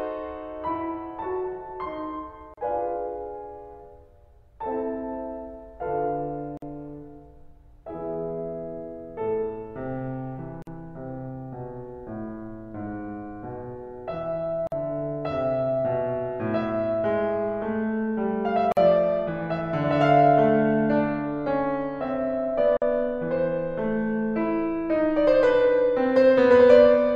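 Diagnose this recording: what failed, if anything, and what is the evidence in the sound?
The music was encoded in separate pieces and joined without trimming the encoder's start-up delay and last-frame padding, so this is a gap at a join of encoded pieces, a codec-stage fault. Silences open in the music at 2.54, 6.57, 10.62, 14.67, 18.72 and 22.77 s, the first about 36 ms and the rest 49 ms, with smeared edges. The music then resumes where it stopped, and the spacing points to 4-second pieces.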